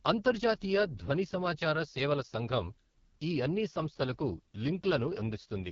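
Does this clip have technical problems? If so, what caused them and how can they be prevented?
Yes. The whole clip carries heavy AMR wideband (HD Voice) codec damage. The speech has a rough, raspy grain from start to finish, and nothing gets above about 7.1 kHz. That roughness fits AMR-WB's lowest 6.6 kbit/s mode. At that rate the vocal tract model and its pulse excitation are too coarsely coded to track the voice cleanly, and the top band is just filler noise. To prevent it, run the link at 12.65 kbit/s or higher.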